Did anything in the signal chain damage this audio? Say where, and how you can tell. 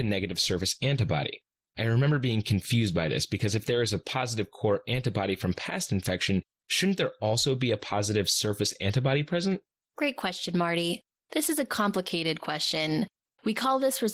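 Yes, at the codec stage: Opus voice compression runs through the whole speech clip, and the damage is plainly audible. The speech sounds hoarse and slightly robotic from start to finish, which fits hybrid-mode Opus at roughly 16 kbps with 20 ms frames. In this mode, linear-prediction SILK codes the band below 8 kHz and a CELT layer carries the top of the fullband range. At that budget the excitation is coded coarsely, and that produces the roughness.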